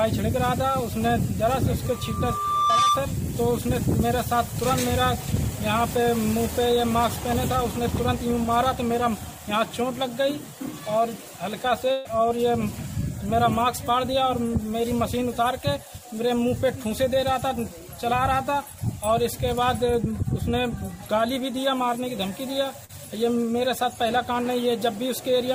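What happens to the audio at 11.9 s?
From 11.91 to 12.07 s the sound smears into a fading hold, then jumps ahead. A burst of packet loss dropped 140 ms, and the receiver concealed the gap.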